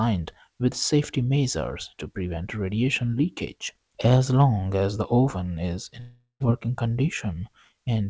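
From 6.00 to 6.42 s the sound smears into a fading buzz, drops to brief silence, then resumes with material missing, likely a long network dropout.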